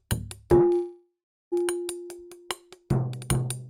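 At 0.73 s there's a call audio freeze lasting about 0.8 s. The sound smears into a fading buzz, goes silent for roughly 0.38 s, then resumes where it left off. Likely delayed packets draining the jitter buffer.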